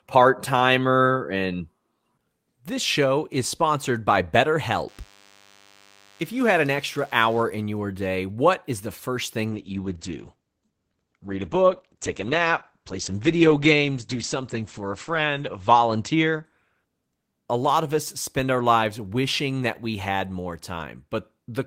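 DECT cordless phone buzz, 4.88 to 7.43 s, ending before "in your day what": a nearby DECT handset's radio bursts every 10 ms get rectified, leaving a thin 100 Hz buzz about 30 dB under the speech. Call bitrate drop, 9.51 to 18.63 s, from "is the first thing" to "lives wishing that we": the encoder fell from 32 to 10 kbps, bottoming out for 5.31 s, and bandwidth shrank from 20 kHz to 8 kHz, so speech sounds coarse and muffled.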